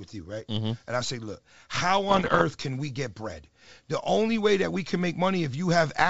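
Speech over what sounds like a G.722 wideband call, with clear audio up to 7 kHz, carries bit errors on an ADPCM link from 2.09 to 2.42 s. Flipped bits, at an error rate of around one to two percent, throw the decoder's step size and predictor off, so each error rings on briefly as pops and rough, level-jumping bursts. Unlike packet loss, nothing drops to silence or repeats. The sound keeps going but turns harsh.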